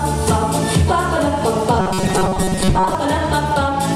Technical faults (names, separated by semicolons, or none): robotic sound from repeated short buffers